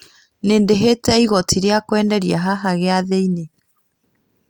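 No technical faults can be heard anywhere in the speech recording.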